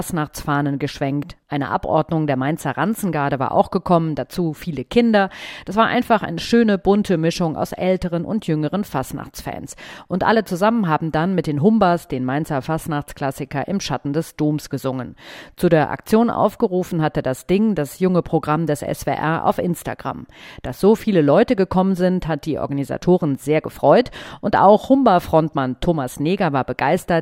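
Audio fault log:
No faults are heard anywhere in this audio. There is nothing to list against any time.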